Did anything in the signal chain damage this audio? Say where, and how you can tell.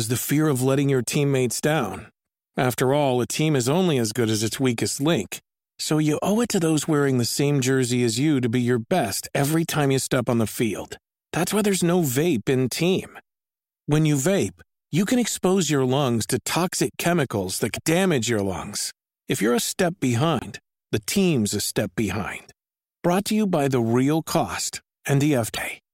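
Yes, at the codec stage: the speech jumps ahead with a brief glitch at 17.75–17.78 s, between "toxic chemicals that" and "damage your lungs", at 20.39–20.45 s just before "the team's a step", and at 25.54–25.58 s. Each lasts about one or two 26 ms MP3 frames, the likely cause being a broken MP3 bit reservoir, where frames after a cut decode using borrowed bytes from the wrong frame.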